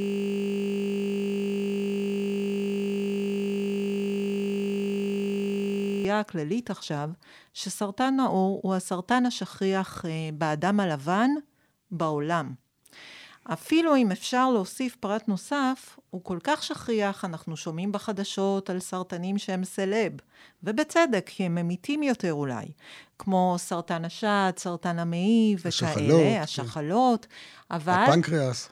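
A steady 50 Hz buzz runs from the start to 6.05 s: a system hang loop, replaying one 20 ms piece of audio while the system froze.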